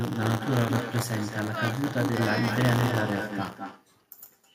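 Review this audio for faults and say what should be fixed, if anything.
A steady robotic buzz at 100 Hz runs under the speech throughout. This is buffer tearing: writer and hardware reader cross inside each roughly 10 ms period, splicing in a small slice of audio a few tens of milliseconds old. Prevent it by resynchronising the ring buffer's write pointer so it stays safely ahead of the read position.

A quieter, thinner copy trails every phrase by about a fifth of a second, sitting about 8 dB below the speech throughout. This is echo with no canceller: the far end's loudspeaker output reaches its microphone and returns uncancelled. Prevent it by enabling acoustic echo cancellation at the far end, or by having that side use a headset.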